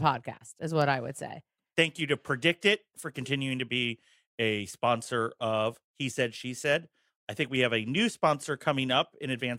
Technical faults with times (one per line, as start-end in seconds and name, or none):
none